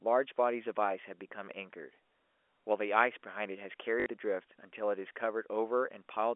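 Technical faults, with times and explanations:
4.00–4.06 s, packet loss with last packet repeated: about 60 ms went missing, and the receiver filled the gap by replaying the last good chunk, giving a brief robotic stutter. The length fits three 20 ms packets, so the repeat buzzes near 50 Hz. On a waveform, the same short shape recurs three times, with steps at the seams. A spectrogram shows the same 20 ms slice repeating three times across the telephone band.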